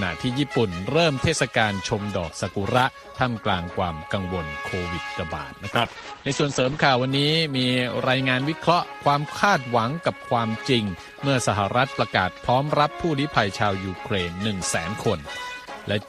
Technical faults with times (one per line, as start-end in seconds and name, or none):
5.75-7.15 call bitrate drop